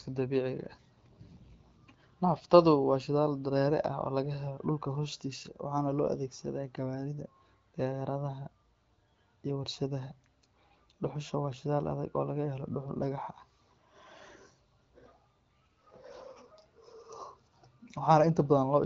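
Nothing stood out on listening to this speech, which comes through the AMR wideband (HD Voice) path with its top end stopping around 7.5 kHz.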